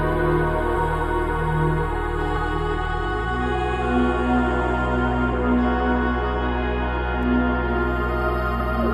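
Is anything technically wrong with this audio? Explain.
Yes. At 0.75 s, 5.32 s and 8.6 s the music briefly jumps forward. These are compressed frames skipped. Whole 23.2 ms frames were lost or rejected by the decoder, so about 150 ms, then about 200 ms, then about 150 ms of music never plays.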